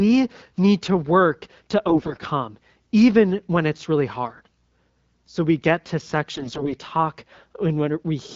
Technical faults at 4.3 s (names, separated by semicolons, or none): AMR bit errors